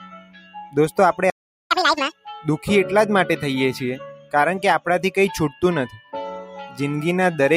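A noise suppressor applied to music or sounds stays active across the whole clip. It was built for speech, so it treats steady tones and tails as noise. The level swings by roughly 5 dB, and held sound pumps and thins while attacks pass.

From 0.2 to 0.55 s, sound is cut by the noise suppressor. The level dips by about 9 dB. The steady part sinks and its decay shortens. Sharper onsets in the same stretch come through more intact.

At 1.3 s the output goes silent for about 0.41 s, until 1.71 s. This is a playback stall. The sound stops mid-flow. The likely cause is the player running out of data or its thread being blocked.

From 1.71 to 2.12 s comes catch-up at higher speed. The player resamples its backlog at 2.0 times normal speed. Pitch jumps up by close to ten semitones and everything rushes.

From 4.16 to 4.33 s the suppressor cuts the sound again. The drop reaches about 11 dB. The sustained portion sinks sharply and its tail is clipped short.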